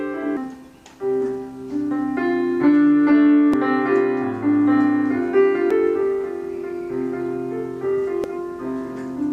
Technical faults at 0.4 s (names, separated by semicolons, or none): damaged data in a compressed stream